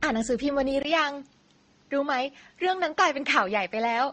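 Speech throughout has a smeared, doubly coded texture with nothing above 9.6 kHz, which fits MP3 then Opus at low bitrates, likely transcoding between lossy codecs. At 0.83 s a 20 ms gap precedes duller sound cut off at 7.6 kHz, with faint new background noise and an unchanged level, likely the input switched to a poorer device.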